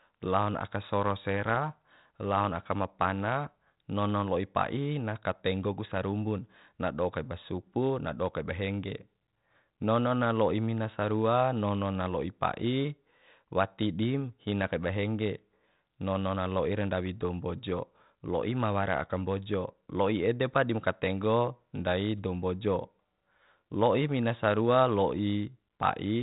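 Nothing in this speech clip stands out as a technical problem, and the 32 kbit/s G.726 telephone coding it runs through sounds just as that path normally would.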